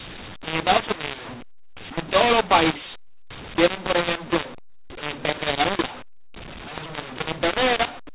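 Right through the speech there's a mu-law and A-law mix-up: mu-law telephone audio decoded as A-law, so levels scramble, it turns harsh and gritty, and pauses fill with hiss.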